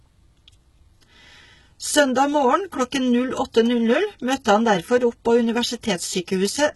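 Throughout the speech, the treble appears to have been rebuilt rather than coded, likely from HE-AAC compression at a very low bitrate, around 16 kbps. The copied upper bands don't line up with the real harmonics, so s sounds come out heavily gritty, metallic and lispy.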